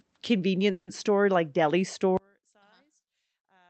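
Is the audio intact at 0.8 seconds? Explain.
No. A call audio freeze runs from 0.71 to 0.89 s, likely from delayed packets draining the jitter buffer. The last sound is stretched into a fading buzz and then goes silent for about 80 ms. Unlike a dropout, nothing is lost: the speech resumes at "store like deli", 160 ms late.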